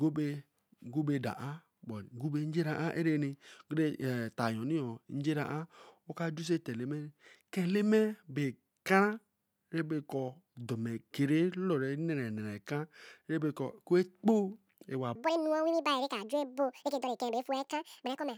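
A section at the wrong speed runs from 15.15 s to the end of this speech recording, at 1.97 times normal speed, so the voice turns hurried and rises around ten semitones at once, likely from that stretch being played against the wrong clock.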